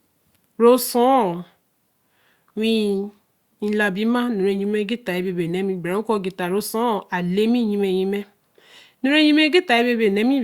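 Nothing in the recording stood out as a problem on listening.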